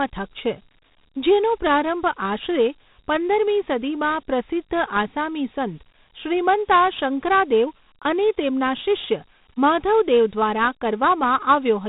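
Dialogic VOX ADPCM runs throughout the speech. Nothing survives above 3.8 kHz. Coarse 4-bit steps add a plainly audible gritty hiss, which fits 32 kbps.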